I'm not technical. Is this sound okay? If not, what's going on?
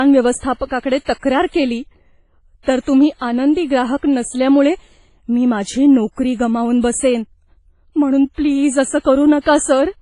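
No. The speech was most likely squeezed through WMA compression, a Windows Media Audio squeeze that keeps the file small by discarding detail it judges unimportant. Here it was squeezed hard, so the damage runs from start to finish. The top end is cut off above about 10 kHz, leaving the speech dull, and the remaining sound rings and smears heavily, with a washy hiss that rises and falls with each phrase.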